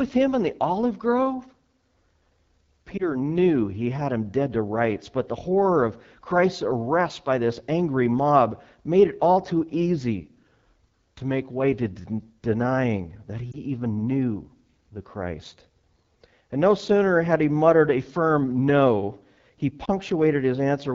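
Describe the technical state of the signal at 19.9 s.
Lost AMR speech frames, 19.85 to 19.89 s: a failed frame made the decoder reuse the previous pitch and vocal tract settings at reduced gain, heard as a brief dip or warble consistent with one 20 ms frame. Underneath, the AMR wideband (HD Voice) codec runs at 8.85 kbit/s, one of its lowest rates, so the speech sounds plainly rough and raspy.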